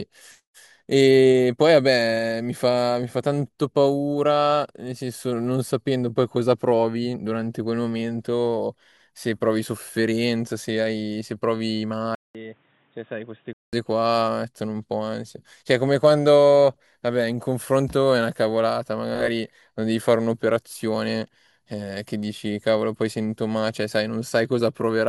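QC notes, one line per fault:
12.15–13.73 s, input switched to a poorer device: the speech abruptly turns dull and boxy, with nothing above 3.8 kHz, a level drop of roughly 10 dB, and a new noise floor around 35 dB under the signal. A gap of about 0.2 s opens at the change. These traits together are the signature of a different capture path, likely a fallback microphone or a headset call profile, with its own band limit, gain and noise.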